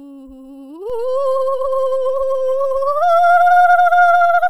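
At 0.9 s there's a DC step: the waveform's zero line suddenly shifts by about -27 dBFS and stays there right to the end. You hear it as a single low thump at that moment, while the music itself carries on untouched.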